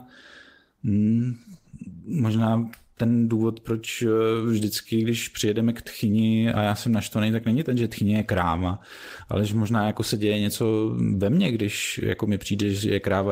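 No technical faults can be heard anywhere in this speech recording; the signal stays continuous and stable throughout.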